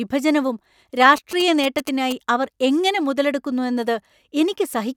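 From 1.17 to 2.13 s, GSM signalling bursts break into the speech. A nearby 2G phone is signalling, and the audio circuit rectifies its radio bursts. It is a galloping run of ticks and short 217 Hz buzzes, about 10 dB below the speech.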